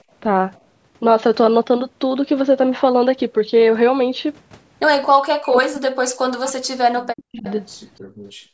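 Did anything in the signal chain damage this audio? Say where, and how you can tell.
Yes. From 5.37 to 7.45 s the speech sinks and breaks up, falling by roughly 40 dB at its deepest across about two seconds. This is in the call processing stage, likely speech suppressed in double talk: the echo canceller could not separate this talker from the far side's echo and attenuated both.

At 7.44 to 7.53 s a brief, faint repeat of the voice appears 288 ms behind the original, about 20 dB below the speech. This is likely an echo leak: the loudspeaker end's echo canceller left some of its microphone pickup in place, and that residue travelled back down the call.

From 8.01 s to the end, the room sound collapses by about 35 dB for roughly half a second. This is background gated by the echo canceller, still in call processing. The canceller clamped the microphone down hard while the loudspeaker was playing, so the ambience drops out instead of continuing.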